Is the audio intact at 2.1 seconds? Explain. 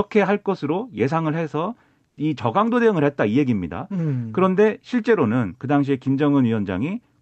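No. From 2.09 to 2.17 s, likely discontinuous transmission paused sending, so comfort noise replaced the background: steady, featureless noise about 5 dB quieter.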